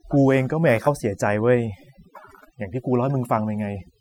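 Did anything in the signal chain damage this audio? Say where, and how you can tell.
Yes. Overdone noise removal at the call-processing stage runs through the whole clip. A suppressor set too hard drops bands near its noise estimate, leaving near-silent gaps with twinkling specks. On a spectrogram the background shows scattered isolated dots, and quiet harmonics are eaten away.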